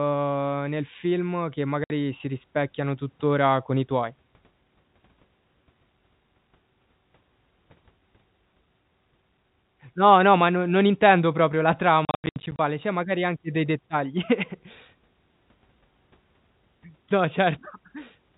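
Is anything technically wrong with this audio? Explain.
Yes, there's packet loss filled with silence. At 1.84 s a clean 60 ms hole opens. From 12.05 to 12.59 s about 310 ms goes missing in scattered gaps, the longest 90 ms. The receiver played silence for the missing packets, so the speech gets chopped with hard edges. The gap sizes fit 10 ms packets. The dull, telephone-band sound throughout comes from G.711 coding, not a fault.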